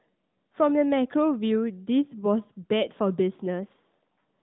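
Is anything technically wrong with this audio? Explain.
No, nothing technically wrong can be heard here.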